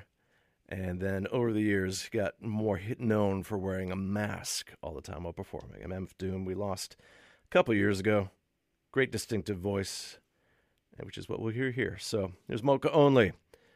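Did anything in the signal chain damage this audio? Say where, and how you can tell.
No, nothing in the signal chain damaged this audio.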